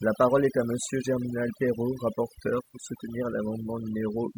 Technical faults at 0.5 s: overdone noise removal

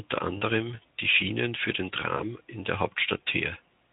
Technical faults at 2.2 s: VoIP packet loss concealed by the speech codec

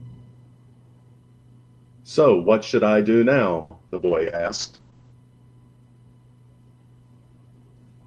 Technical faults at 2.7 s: none

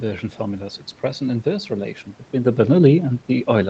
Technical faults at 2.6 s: none

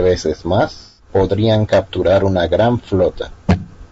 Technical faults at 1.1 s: low-delay AAC compression; AAC frame loss with concealment

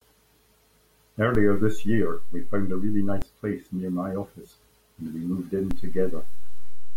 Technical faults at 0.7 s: none

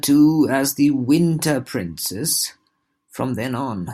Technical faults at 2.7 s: none

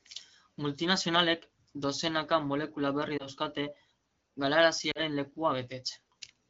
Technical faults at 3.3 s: lost AMR speech frames

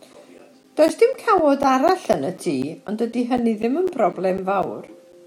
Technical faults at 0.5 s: periodic USB or driver dropouts

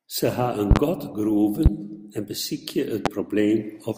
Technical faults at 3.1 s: loud pop

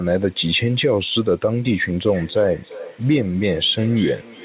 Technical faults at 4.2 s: feedback echo between two devices

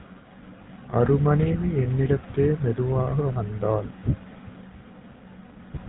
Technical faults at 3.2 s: GSM full-rate codec

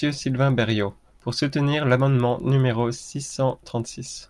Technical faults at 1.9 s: resampler restarted on every block

